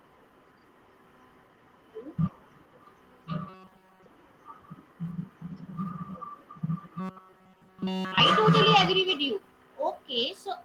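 From 3.49 to 4.06 s and again from 6.99 to 8.20 s, the speech turns into a rigid metallic buzz at 188 Hz, which is robotic sound from repeated short buffers. The likely cause is a roughly 5.3 ms block being replayed while new audio is skipped, affecting most of the first stretch and all of the second.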